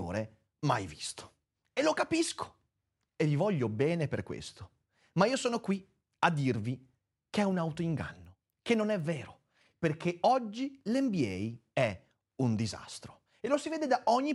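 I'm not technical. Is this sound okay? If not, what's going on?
No. From 7.5 to 9.0 s there is a resampler restarted on every block. The speech is being converted to a higher sample rate, which fits a change from 24 kHz to 48 kHz, but it is handled in separate 250 ms chunks that don't connect with their neighbours. Each chunk edge gets a small glitch, so you hear a steady ticking four times a second over the voice during that stretch.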